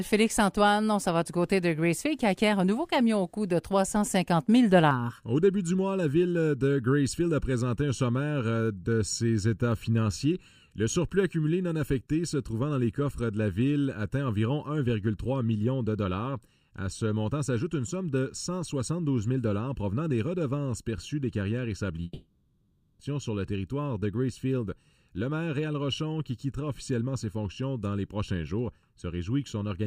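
From 4.91 s to the end, channel delay (comb filtering) makes the audio hollow and phasey. One channel lags by well under a millisecond, so mono summing carves fixed notches starting around 700 Hz, unlike moving codec swirl. At 22.03–23.02 s the sound smears into a fading buzz, then briefly goes silent and resumes with material missing, most likely a long network dropout rather than a clean edit gap.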